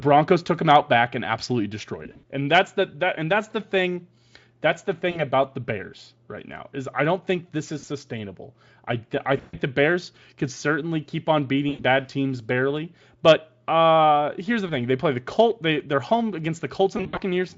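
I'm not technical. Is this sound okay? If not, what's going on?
No. The speech has VoIP packet loss concealed by the speech codec. Bits of the call went missing, and the decoder filled the gaps by stretching the last sound into a fading buzz. You'll hear that at 2.03–2.25, 5.11–5.22, 7.79–7.85, 9.37–9.57, 11.69–11.84, 14.67–14.72 and 16.97–17.2 s.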